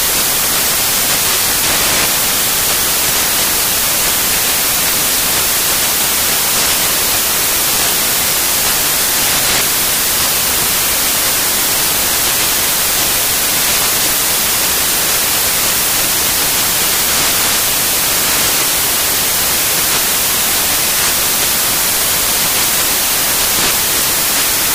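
The whole clip is loud, harsh broadband noise: its samples are built from the wrong bytes. The reader misassembles each value, so the fast-changing low bits dominate.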